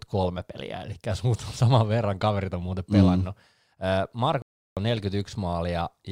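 At 4.42 s the speech cuts out abruptly and stays silent for about 350 ms, until 4.77 s, before continuing. This is a playback stall: the player likely ran short of data or had its output thread blocked, leaving the output empty until it recovered.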